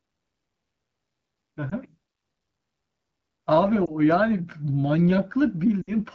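At 1.70 to 1.74 s and 3.85 to 3.91 s the speech briefly dips or warbles, and at 5.82 to 5.93 s it drops to near silence. These are lost AMR speech frames: the decoder fills the missing frames by repeating the last good pitch and vocal tract settings at falling gain. The first two fit single 20 ms frames; the last suggests about 60 ms lost. Unlike a plain dropout, the gap is filled with a fading sound rather than hard silence, heard against the clear AMR-WB wideband speech.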